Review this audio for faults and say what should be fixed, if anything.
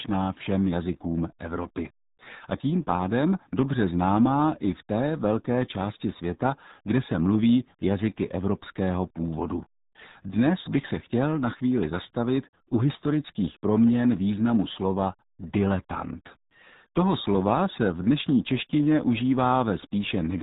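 RealAudio 14.4 codec damage runs throughout. The speech sounds muffled and gargly, with nothing above 3.8 kHz, which fits an 8 kbit/s dial-up codec. Re-encode from the original source using a modern wideband codec at a higher bitrate.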